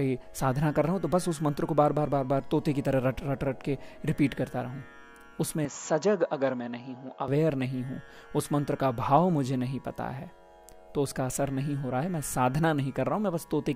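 From 5.65 s to 7.28 s the sound abruptly turns duller, with nothing above about 7.3 kHz, and a faint new background noise sits far beneath it. The loudness barely shifts and there is no gap at either edge, so the change is one of tone and noise. This is most likely an input switched to a poorer device: recording briefly moved to a narrower-band microphone with its own character and noise, then returned.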